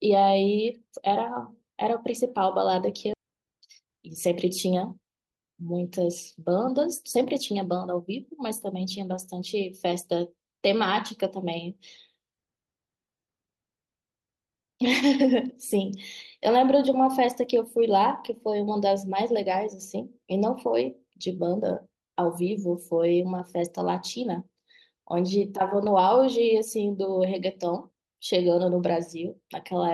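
Speech clip with a skip ahead at 3.13–3.15 s: about 0.7 s of audio vanishes and both sides join directly, with no silent gap as a dropout would leave. A jitter buffer speed-up follows from 3.23 to 5.54 s, running the speech about 11% fast at unchanged pitch, unlike resampling, as short pitch-period pieces totalling roughly 0.3 s are trimmed.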